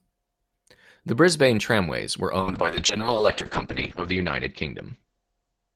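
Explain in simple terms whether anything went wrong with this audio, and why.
A call bitrate drop starts at 2.41 s, just after "tramways were", and lasts to the end of the clip. The call's estimate of how much data the connection could carry fell sharply, so the encoder was told to describe the speech with far fewer bits. It coded the sound more roughly and dropped everything above about 8 kHz. That makes the speech sound muffled and rough, and it is at its worst for just over a second.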